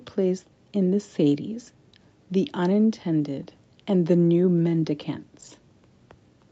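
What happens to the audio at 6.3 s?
At 6.3 s the speech carries on intact, with no fault at that moment beyond the normal call-path sound of the Opus codec, which leaves nothing above 8 kHz.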